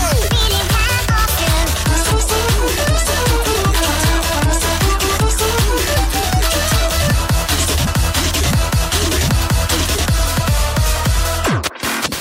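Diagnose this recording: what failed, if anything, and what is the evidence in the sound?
Damaged data in a compressed stream, with brief blips at 2.10, 5.96 and 7.86 s, each under 20 ms. This is a codec and storage or transport fault: corrupted bytes made the decoder misread frames, lose sync and hunt for the next frame header.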